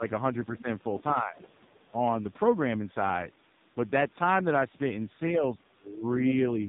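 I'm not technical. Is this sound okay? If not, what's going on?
No. The whole recording went through the AMR narrowband mobile codec at a very low quality setting, so it sounds muffled and buzzy, with nothing above about 3.8 kHz.

Speech suppressed in double talk: the talker's voice dips or fades at 0.00–0.05 s, 1.14–1.38 s and, most deeply, 5.37–6.40 s, likely because the call's echo canceller turned both sides down while both talked.

Other side's voice leaking through: a faint second voice, likely the other caller's audio picked up from the loudspeaker, can be heard at 0.57–0.61 s and 1.41–1.91 s.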